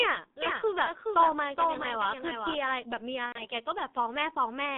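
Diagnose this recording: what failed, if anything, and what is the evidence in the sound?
The codec stage is the main problem. The whole recording has been through a G.723.1 codec, and heavily. The speech sits in a narrow telephone band of about 200 Hz to 3.7 kHz, so it sounds muffled and a bit hoarse, with smeared consonants. That fits the roughly 6.3 kbit/s mode. At that rate the coder updates its model of the voice only every 30 ms frame, so fast detail gets averaged away.

There's also a network dropout with VoIP packet loss concealed by the speech codec, from about 3.26 to 3.47 s. About 90 ms of audio went missing, which fits three lost frames. The decoder kept repeating its last pitch and vocal-tract shape at falling gain, so the sound stretches into a fading buzzy tone or coloured noise. Each frame builds on the previous one, so the speech stays thin or warped for a while after packets return.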